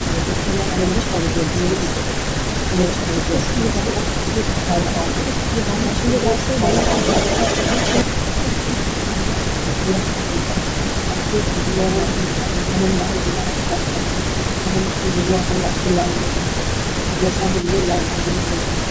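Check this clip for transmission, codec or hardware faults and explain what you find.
Three faults are present in this speech: a doubled track throughout, repeated suppression of the talker, and two patches of echo.

Doubled audio track, throughout: a second, equally loud copy of everything trails roughly two seconds behind, dry and full-band. This is likely a second capture path or an edit that left two copies out of step, summed into one track.

Speech suppressed in double talk, at 0 to 2.15 s, 2.69 to 6.6 s, 8.03 to 11.56 s, 12.09 to 17.45 s and 18.08 to 18.79 s: the voice repeatedly sinks about 10 dB, and about 15 dB in the 8.03 to 11.56 s stretch. The cause is likely an echo canceller that could not tell the talker from loudspeaker echo while both sides spoke, so it turned everything down.

Echo leak, at 6.71 to 8.03 s and 17.61 to 17.68 s: a copy of the voice follows 96 ms behind. 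It sits about 5 dB under the speech in the first stretch and about 20 dB under in the brief second one. The likely cause is a far-end loudspeaker whose echo canceller let some of its microphone pickup back into the call. The call's normal 8 kHz band limit is audible alongside it.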